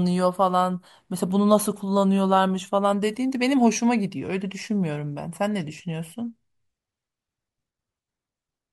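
Speech recording, no technical faults detected.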